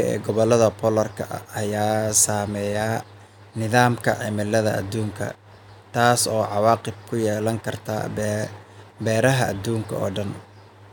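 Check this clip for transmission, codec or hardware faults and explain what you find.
Nothing wrong can be heard in the signal: the speech arrives continuous and intact, with steady level and timing throughout.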